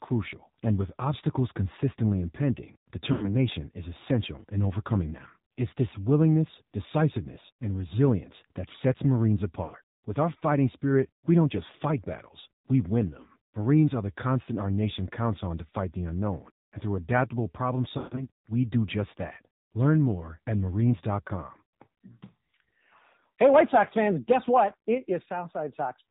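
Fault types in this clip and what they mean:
AMR narrowband mobile codec: the whole clip runs through 2G/3G phone coding at 7.4 kbps, so nothing above 4 kHz and the speech sounds buzzy and synthetic.
Lost AMR speech frames: four dropouts where the decoder stretched the last good sound and faded it, worst around 18.0 s after "and through adaptable problem", with one 140 ms run.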